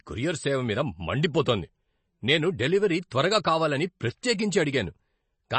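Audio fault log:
throughout, MP3 compression: the speech sounds plainly degraded and dull, with nothing above 8.3 kHz. The likely cause is an MP3 encoder short of bits, which fits a bitrate near 32 kbps: it cuts the treble at a fixed point and discards weak frequency detail.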